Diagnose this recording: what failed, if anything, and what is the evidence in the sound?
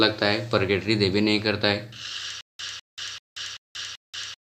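From 2.41 s to the end, a 0.20 s burst repeats five times at a steady 0.39 s period, separated by 0.18 s of digital silence. This is a stutter with silent gaps, likely a playback buffer stall, replaying its last fragment at each retry. Unlike random dropouts, the identical repeated burst and strict spacing mark it.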